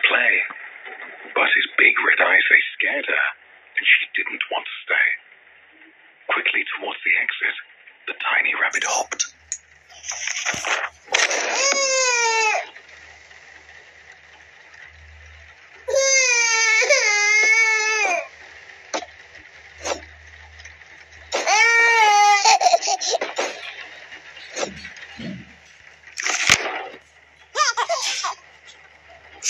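From the start to 8.71 s, the sound is dull and boxy, with nothing above 3.7 kHz. The likely cause is an input switched to a poorer device. At 8.71 s it clears, with no gap and no level jump. Its faint noise sits about 55 dB down.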